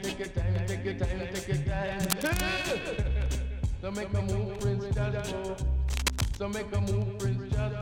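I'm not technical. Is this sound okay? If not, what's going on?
No. Cable scratch noise at 2.03 to 2.42 s and 5.86 to 6.41 s: brief scratchy rustling, likely from a worn cable or plug being moved.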